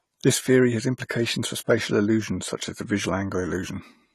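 From start to finish the speech has likely passed through AAC compression, an AAC-LC encoder working at a rate that fits about 32 kbps. Short of bits, the encoder quantises its frequency lines coarsely against its hearing model and discards the top of the band, so nothing remains above 13.7 kHz. The damage is plainly audible: the voice sounds dull and smeared, lacking air and crisp detail in its upper range.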